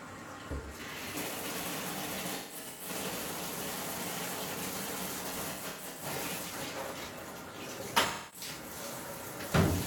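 Smeared, noisy patches interrupt the audio at 2.35 to 2.89 s, 5.28 to 6.05 s and 8.07 to 8.48 s, the first two with runs up to about 150 ms. This is AAC frame loss with concealment: the decoder rebuilt missing frames from the last good spectrum.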